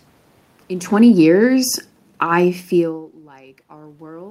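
From 0.71 s to 3.25 s the automatic gain is falling: the gain control judged the input too loud and eased its gain down by about 13 dB. Speech and room noise sink together. On a waveform the whole envelope tapers, noise floor included, unlike a talker moving away.

From 3.2 s to the end, automatic gain is rising after the input dropped by about 20 dB. The control lifts its gain gradually, so speech and background swell together, visible as a slow ramp in level and a brightening noise floor on a spectrogram.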